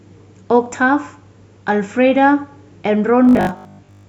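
From 3.25 s to the end at 4.09 s the speech goes robotic from repeated short buffers, a stiff metallic buzz around 50 Hz. It's likely the player looping tiny 20 ms chunks while fresh audio arrives late, for most of that stretch.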